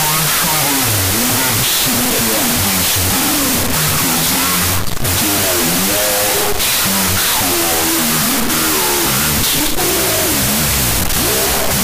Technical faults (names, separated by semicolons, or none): wrong sample width